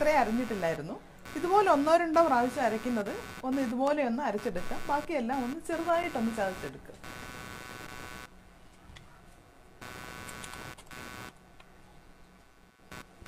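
Running under the whole clip there's computer activity noise, a buzzy, scratchy pulsing at roughly 150 Hz sitting around 20 dB below the sound. It rises and falls with the machine's workload rather than the audio, as processor or graphics load drags the shared ground of the audio circuit around. At 6.03 s there's a gap at a join of encoded pieces: a 7.7 ms gap with smeared edges, where two separately encoded chunks were butted together with their start delay and end padding left in, before the sound picks up where it left off.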